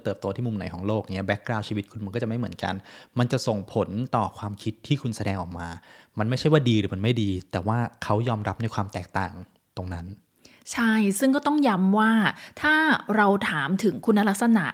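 No technical faults can be heard anywhere in the recording.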